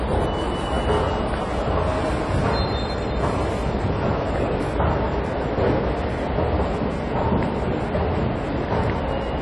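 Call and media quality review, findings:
AAC compression, throughout. Dull, smeared audio with plainly audible codec damage; nothing above 11.4 kHz. Warbling, fizzy texture on sustained and noisy sound, which fits AAC-LC at a low bitrate around 32 kbps, likely in the encoder. A simple low-pass filter would stop at a clean cut-off without the holes, swirling and substituted noise in the remaining bands.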